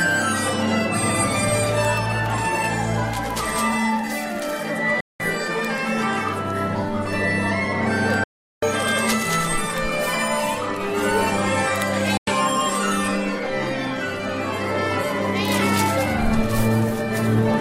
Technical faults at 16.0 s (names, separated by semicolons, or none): none